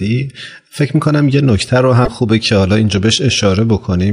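A speech recording with one burst of damaged data in a compressed stream, from 2.03 to 2.08 s. For about 60 ms the decoder is fed corrupted frames, misreads them and loses sync until it finds the next valid frame header, leaving a brief chirp, squawk, click or short hole.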